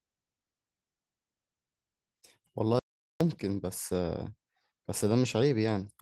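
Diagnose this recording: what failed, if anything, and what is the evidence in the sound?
The input path lost its signal from 2.79 to 3.21 s, and the recorder kept writing silence, which points to an audio dropout to silence, likely from a momentary device disconnect, failed link or stray mute upstream of the encoder. The speech cuts off mid-flow and returns abruptly about 0.41 s later, and the gap is dead silence with no room tone, so whatever was said then is missing. The light Opus voice compression cannot have produced a gap this clean.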